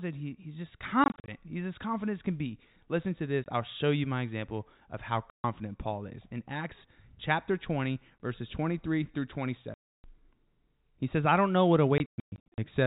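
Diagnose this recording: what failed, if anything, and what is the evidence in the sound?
The network dropped packets and the receiver played silence in their place: packet loss filled with silence. Hard-edged holes, sized in steps that fit 20 ms packets, chop the speech after "that he he's just" at 1.04–1.28 s, and at 3.44 s, 5.3–5.44 s, 8.18 s, 9.74–10.04 s and 11.98–12.58 s.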